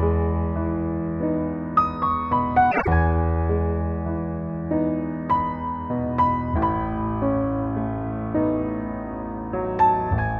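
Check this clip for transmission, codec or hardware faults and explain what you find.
One fault is present: frames out of order, from 2.71 to 2.88 s. Two neighbouring runs of audio, each about 84 ms, arrived swapped and were decoded in that wrong order. Each run was two frames, with a block size of about 52.2 ms. The short stretch therefore plays with its halves exchanged. It is heard as a brief garbled flutter. No time is missing, so the clip's timing stays intact.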